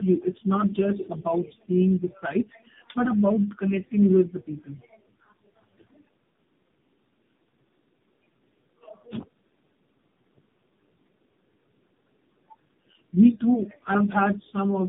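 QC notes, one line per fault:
throughout: tandem speech coding, with rough, muffled, warbly speech and nothing above 3.7 kHz, which points to three chained speech coders, each re-encoding the previous one's errors.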